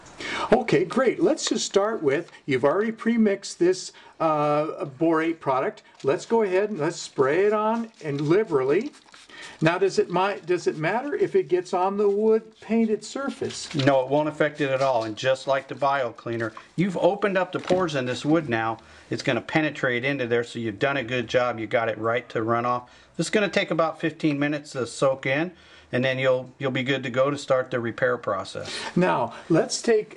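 No technical faults can be heard anywhere in this recording.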